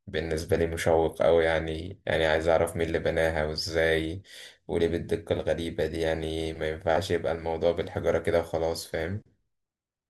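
From 0.65 to 2.15 s the resampler restarted on every 50 ms block, misconverting each block edge. The result is 20 Hz ticking that, unlike steady hum, sounds only while speech is present.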